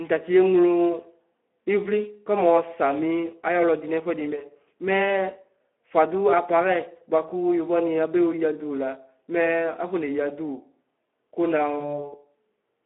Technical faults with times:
0.00-12.85 Speex codec
11.79-12.09 VoIP packet loss concealed by the speech codec

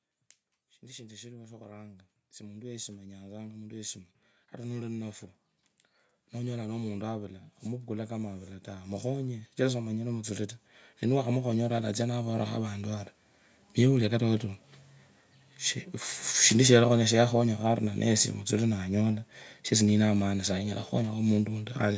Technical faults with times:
0.81-5.24 automatic gain rising
6.33-13.01 automatic gain rising

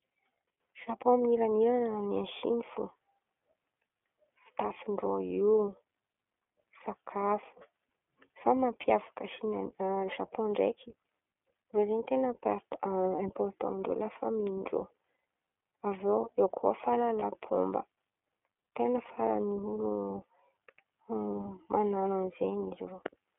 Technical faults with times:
0.00-23.39 iLBC codec
8.81-8.85 lost iLBC frames
17.20-17.24 lost iLBC frames

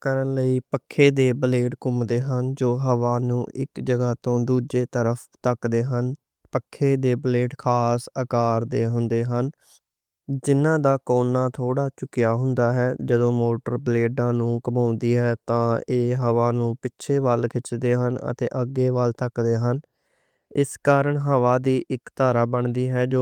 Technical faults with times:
none

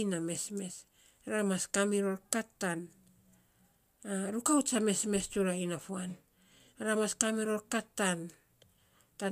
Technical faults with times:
none

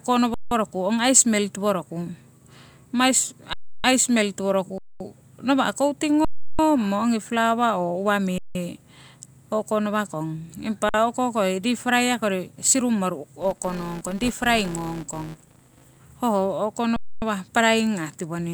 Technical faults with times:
0.34-0.51 underrun with held sample
3.53-3.84 underrun with held sample
4.78-5.00 underrun with held sample
6.25-6.59 underrun with held sample
8.38-8.55 underrun with held sample
10.89-10.94 underrun with held sample
13.40-15.98 filter restarted on every block
16.96-17.22 underrun with held sample

